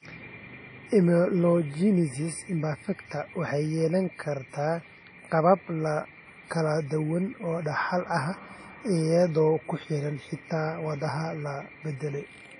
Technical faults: WMA compression

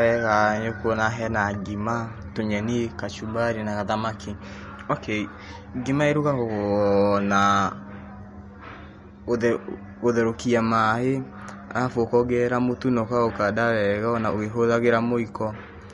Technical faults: MP3 compression

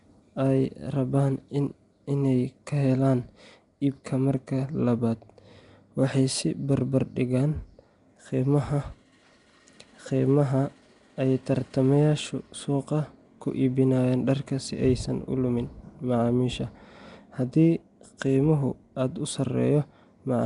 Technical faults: Nellymoser compression

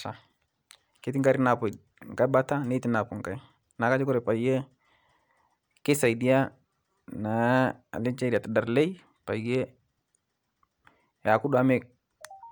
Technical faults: none

